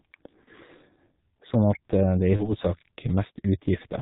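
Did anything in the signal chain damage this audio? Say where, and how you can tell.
Yes, the damage happens at two stages, the codec and the network.

The codec stage affects the whole clip. The speech sounds muffled and hoarse, with nothing above 4 kHz and consonants smeared together. That matches heavy G.723.1 coding, and the coarseness points to its 6.3 kbit/s mode. The encoder models the voice in 30 ms frames and updates that model slowly, so fast detail is lost. A simple low-pass filter would only dull the top end. It would not add this rough, hoarse texture.

The network stage causes VoIP packet loss concealed by the speech codec, at 0.44–0.49 s and 2.36–2.55 s. Each event fits a single lost 30 ms frame. There is no silent gap, which rules out a plain dropout. Instead, the decoder keeps going from its last pitch and filter settings, producing a stretched buzzy tone or coloured noise that fades. 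At 2.36 s the distortion continues well past the lost frame, because each new frame builds on the corrupted state of the one before it.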